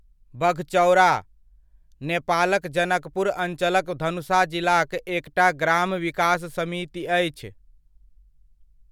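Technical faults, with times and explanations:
No technical faults can be heard in this speech recording. Nothing in it calls for a time or an explanation.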